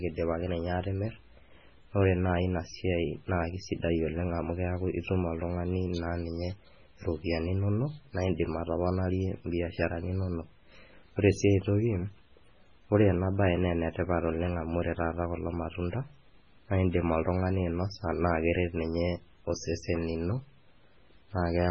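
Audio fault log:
Throughout, MP3 compression: the speech has nothing above 9.9 kHz and carries heavy watery, swirling artefacts, with s sounds turned metallic and chirpy and consonant onsets smeared. The likely cause is MP3 coding starved of bits, and the damage fits a very low rate of around 16 kbps. At that rate the encoder cuts the treble at a fixed frequency and drops quieter frequency lines, which blink in and out between frames and create the swirl.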